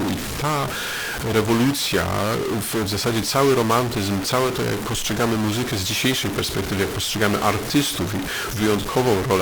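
From start to finish the speech carries a harsh, buzzy distortion, and the gaps between phrases fill with a gritty noise instead of going quiet. That points to a stuck bit, likely a data line or converter bit jammed at 0 or 1. About half the samples end up off by a fixed step near -20 dBFS, which is a fairly high bit, so the noise in the pauses is quite loud.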